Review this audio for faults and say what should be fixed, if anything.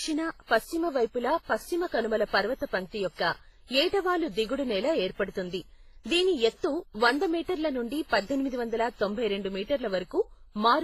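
Transcoding between lossy codecs, throughout the speech: nothing above 15.3 kHz, with two codecs' artefacts stacked, likely a low-bitrate HE-AAC encode re-encoded to WMA. To prevent it, encode once from the original uncompressed source rather than converting between lossy formats.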